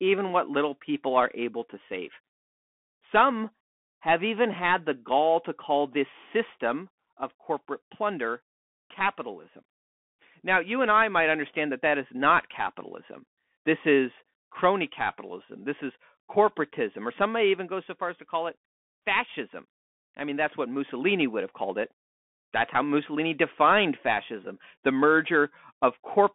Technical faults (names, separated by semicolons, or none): Bluetooth CVSD headset codec